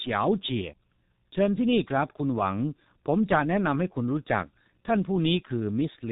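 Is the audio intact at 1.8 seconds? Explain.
No. At 1.8 seconds the speech carries heavy G.723.1 codec damage, present throughout the clip. Coding at about 6.3 kbit/s in 30 ms frames discards everything above 4 kHz and tracks the voice slowly, so the speech sounds muffled and hoarse, with smeared consonants.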